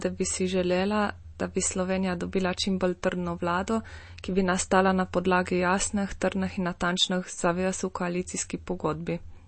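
Throughout, the speech sounds watery and swirly, with nothing above 8.4 kHz, likely from MP3 compression, fitting a low bitrate around 32 kbps.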